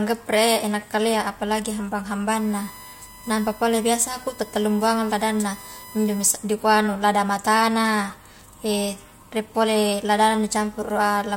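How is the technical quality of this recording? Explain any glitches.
The recording is compromised by one interference fault. From 2.35 to 6.26 s, ending just before "dikua anu lada matana", USB whine appears: a steady 1 kHz tone, roughly 20 dB below the speech, from 1 ms bus frames leaking through power or ground.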